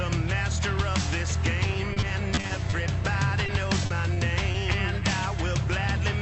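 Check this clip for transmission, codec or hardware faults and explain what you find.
There are two kinds of packet loss here, both patched over by the receiver's concealment rather than heard as silence.

Repeated packet loss (robotic sound), 1.93 to 2.74 s: eight short gaps land in quick succession, the longest about 30 ms, with roughly a fifth of that stretch filled in. Each hole gets stretched from the preceding sound, so the passage turns choppy, with little bits dropping out.

Short concealed packet loss, at 3.46 to 3.50 s, 3.86 to 3.92 s, 4.14 to 4.18 s and 4.52 to 4.56 s: isolated dropouts of 20 to 40 ms each. The decoder extends the last sound across the hole and blends back in, so you get a quick smear or wobble each time.

The call path itself sounds like Opus at around 48 kbps, with the top end rolling off at 8 kHz.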